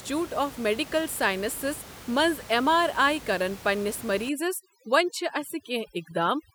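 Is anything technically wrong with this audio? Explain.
Yes. From 4.29 s to the end at 6.54 s there is overdone noise removal: a noise reduction stage set far too aggressively pulls individual frequency bands down or out whenever they sit near its noise estimate, taking quiet parts of the speech with them. The room noise, about 18 dB below the speech, drops and breaks up into twinkling specks.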